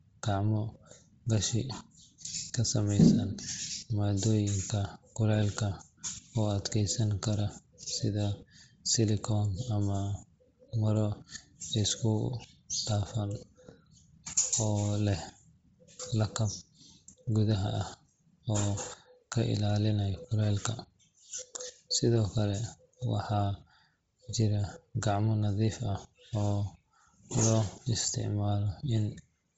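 Throughout the speech, the sound has a breathy, grainy edge. Nothing is heard above 7.7 kHz. This is likely Bluetooth LC3 compression, squeezed hard at a rate that fits about 24 kbps. The codec discards much of the upper spectrum and fills it with noise.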